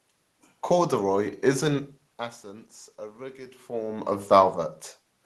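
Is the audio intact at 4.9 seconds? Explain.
Yes, at 4.9 seconds the audio is intact, with no dropout, glitch or other fault at that point.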